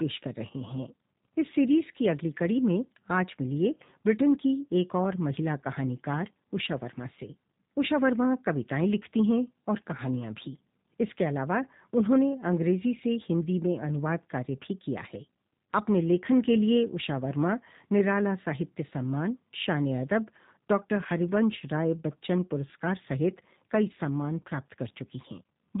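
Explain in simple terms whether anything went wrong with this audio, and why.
Throughout the speech, the G.729 codec's damage is plainly audible. This phone-call compressor rebuilds each voice from a simple model of the throat and a few pulses, so it sounds rough and synthetic. Nothing above 3.8 kHz remains. That roughness, not just muffling, sets it apart from ordinary band-limiting.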